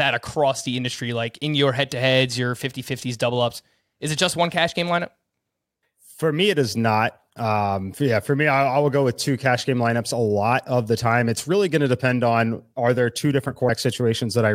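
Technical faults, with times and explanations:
13.68 s, damaged data in a compressed stream: just after "on are there two", a glitch of about 14 ms is heard as the decoder misreads corrupted frame data and resyncs at the next header.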